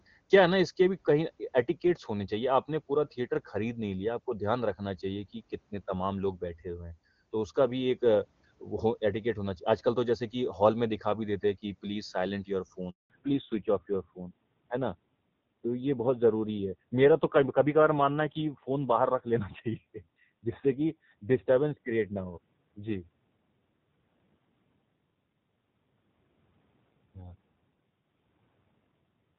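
At 12.90 s a handover gap silences the speech for 200 ms, until 13.10 s. The waveform falls to a flat line and the spectrogram shows an empty vertical stripe, because no frames arrived while the call switched networks.

From 13.10 s to the end, a fallback to narrowband replaces the clear HD Voice sound heard before it. The spectrogram is bare above 4 kHz, and the speech turns duller and rougher, which fits a narrowband codec running near 7.4 kbit/s.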